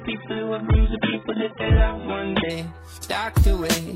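The player opened on a low-bitrate rendition of an adaptive stream and moved to a better one once it had measured the connection, which is a typical adaptive stream starting at a low bitrate. For the first 2.5 s nothing in the audio reaches above about 3.8 kHz, leaving it dull and with stronger codec artefacts, consistent with an AAC stream of roughly 8 kbit/s. At 2.5 s the full treble returns abruptly with no gap, which fits a switch to around 96 kbit/s.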